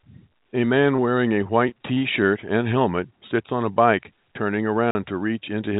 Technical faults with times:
0.96-1.00 short concealed packet loss
1.44-2.03 repeated packet loss (robotic sound)
4.91-4.95 block of digital silence

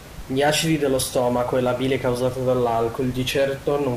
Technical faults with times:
none

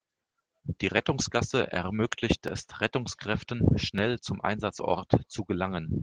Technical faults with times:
0.00-6.03 Opus voice compression

